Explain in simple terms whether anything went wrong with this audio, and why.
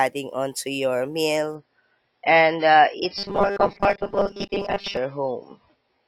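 At 1.55 s the speech suddenly turns rougher, with more coding artefacts, and it stays that way to the end. This is an adaptive stream at a lower bitrate: the connection slowed, so the player switched to a smaller version of the stream.

From 3.17 to 4.97 s the speech turns into a rigid, metallic buzz at a steady 200 Hz. This is robotic sound from repeated short buffers, likely caused by audio arriving too seldom, so the player repeats tiny chunks, about 5 ms each, over most of that stretch.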